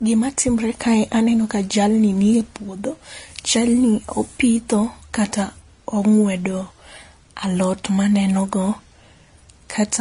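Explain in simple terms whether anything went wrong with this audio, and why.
Something did go wrong, across the whole clip: the speech sounds dull, with nothing above about 10.6 kHz, plus a layered, smeary roughness. That's likely transcoding between lossy codecs, where one compressed version was recompressed, stacking both sets of artefacts.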